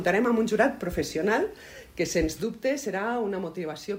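At 2.43 s the level drops abruptly by about 6 dB and stays down to the end of the clip, the pattern of one channel dropping out, most likely a lost stereo side before the mono sum. Material shared by both sides halves in amplitude, and anything panned only to the lost side vanishes entirely. Unlike phase cancellation, the tone stays full rather than hollow.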